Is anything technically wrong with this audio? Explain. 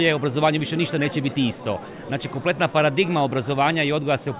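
No, nothing here sounds technically wrong; it all comes across just fine from beginning to end.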